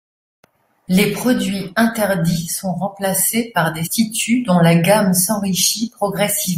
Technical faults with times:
3.83-3.87 damaged data in a compressed stream

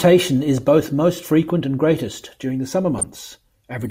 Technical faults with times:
2.98-3.15 DAB burbling

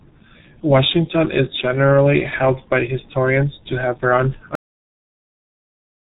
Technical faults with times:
0.00-6.01 G.723.1 codec
4.55-6.01 cut-off end

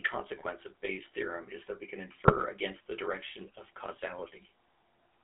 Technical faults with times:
0.00-5.24 GSM full-rate codec
0.36-0.47 GSM bit errors
2.27-2.39 GSM bit errors

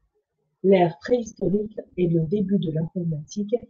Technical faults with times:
1.09-2.35 repeated packet loss (robotic sound)
2.65-3.63 repeated packet loss (robotic sound)

